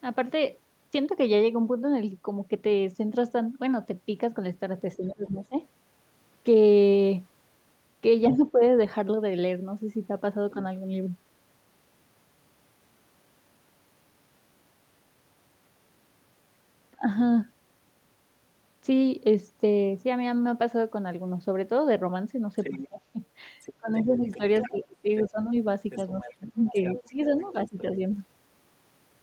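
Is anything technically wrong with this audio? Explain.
Yes. The speech is suppressed in double talk at 4.97 to 5.6 s, 8.3 to 8.61 s, 16.96 s and 22.71 to 27.85 s. It dips by up to about 20 dB. This is likely an echo canceller muting the talker while the far side also spoke.

From 22.56 to 28.17 s the other side's voice leaks through, about 15 dB below the speech. This is likely echo the canceller failed to remove from the microphone.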